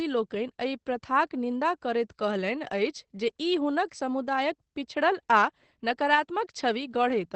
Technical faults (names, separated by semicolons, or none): Opus voice compression